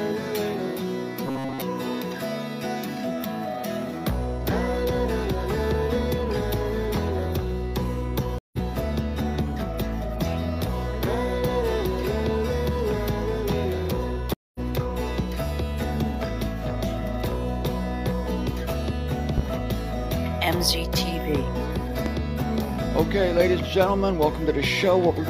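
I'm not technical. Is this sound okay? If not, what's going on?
No, there are three kinds of problem.

From 1.27 to 1.62 s the sound turns metallic and robotic, with a steady low buzz. This is robotic sound from repeated short buffers. New audio likely arrived too slowly, so the player kept replaying tiny slices instead.

At 8.38 s and 14.34 s there is a stream reconnect. The sound stops for a moment, about a seventh of a second the first time and a fifth the second. It then picks up slightly further along, so a small piece is skipped.

At 19.38 s and 22.06 s there is a loud pop. Each one is a single sharp click sitting on top of the sound, which keeps playing underneath. A glitch in a plug, switch or driver is the likely cause.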